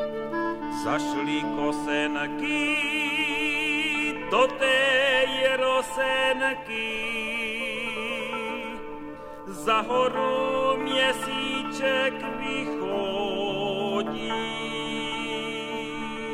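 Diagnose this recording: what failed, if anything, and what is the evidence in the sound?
Nothing failed in this recording, and the sound gives no evidence of a fault.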